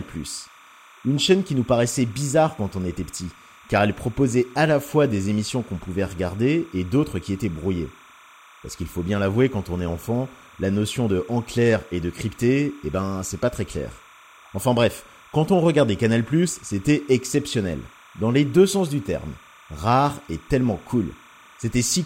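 Linear timecode running at 29.97 frames per second has leaked into the speech path for the whole clip. This timecode bleed sits roughly 25 dB below the speech as a steady chirping warble, flipping between tones around 1 kHz and 2 kHz.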